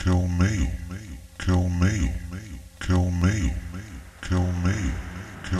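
A recording of everyday sounds has a regular click recurring about every 1.07 s from 1.08 s to 5.35 s, roughly five times in all. These are clock drift buffer slips. The likely cause is two devices running on separate clocks that disagree by several hundred parts per million, so the buffer between them periodically drops or repeats a block of around 30 samples. On a spectrogram each slip shows as a thin vertical broadband line at even spacing. On the waveform each appears as a small step or discontinuity.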